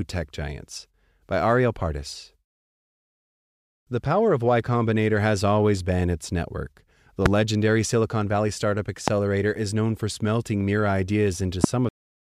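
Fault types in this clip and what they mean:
Loud pop: three single pops, at 7.26 to 7.28 s just after "always been its network", 9.08 to 9.10 s just before "is known for smelting", and 11.64 to 11.66 s. Each is about 20 dB above the speech, which carries on underneath. The likely cause is a brief voltage pulse, not a gap in the signal.
Cut-off end: at 11.89 s the speech stops in the middle of a sound and drops straight to digital silence for the final third of a second, with no decay or fade, because the last stretch of audio was never played. Unlike a pop, nothing continues afterwards.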